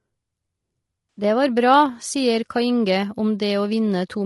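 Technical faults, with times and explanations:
throughout: low-delay AAC compression. The speech sounds rough and grainy throughout, with noise filling the gaps between harmonics and a thin, synthetic top band. This is likely the short-frame AAC-ELD codec used in video calls, and the damage fits a bitrate near 32 kbps.
1.13 to 1.23 s: AAC frame loss with concealment. A brief smeared, noisy patch replaces the speech here. About 80 ms of audio went missing, which fits four dropped frames, and the decoder papered over it by rebuilding from the last good spectrum.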